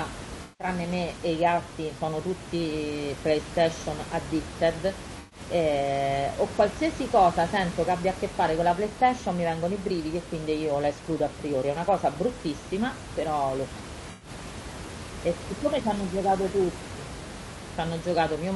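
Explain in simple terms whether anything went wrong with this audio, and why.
Yes, two things. Throughout, the speech sounds rough and grainy, likely from low-delay AAC compression, the squeezed video-call format trading detail for speed. Then at 0.43 to 0.67 s, 5.19 to 5.39 s and 14.11 to 14.29 s, there's AAC frame loss with concealment: chunks went missing, and the decoder patched each gap with a smeared, noisy guess. The quiet room noise underneath is just the room.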